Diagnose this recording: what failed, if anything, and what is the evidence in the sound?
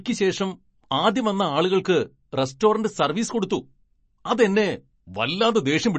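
MP3 compression artefacts run throughout the speech, from start to finish, and the damage is plainly audible. Nothing sounds above 8.3 kHz, where the encoder has cut the top band to save bits. Below that, weak spectral detail drops in and out between frames, giving a watery, swirling texture and metallic chirps on s sounds. The stage is the codec, and the sound points to a starved encode, likely around 35 kbps MP3.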